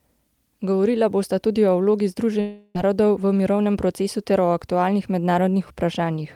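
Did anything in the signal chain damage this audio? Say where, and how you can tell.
Yes. From 2.40 to 2.85 s the speech smears into a fading buzz, then briefly drops out, with about 300 ms missing. This is likely a long network dropout hidden by concealment.

From 3.32 to 3.75 s the speech hurries to 110% speed without any pitch change. This is a jitter buffer speed-up that trimmed about 50 ms of pitch periods to reduce the delay.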